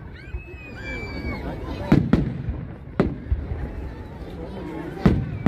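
From 3.05 s to the end, the audio carries a block size mismatch (truncated): one stage hands over longer blocks than the next reads, and each block's tail is discarded. The resulting discontinuities repeat at 91.9 Hz, heard as a steady buzz, while pace stays essentially normal. A waveform shows jumps every 10.9 ms, and a spectrogram shows fine vertical striping with a harmonic comb spaced at about 92 Hz.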